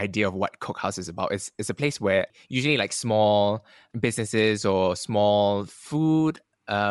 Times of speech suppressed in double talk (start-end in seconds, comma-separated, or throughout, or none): none